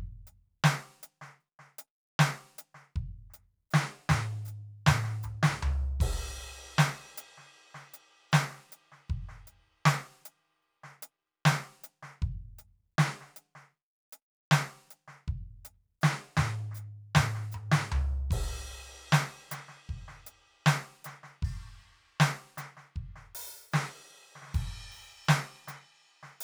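The music runs without any audible technical fault, with no interruptions, distortion or other disturbance anywhere in the signal.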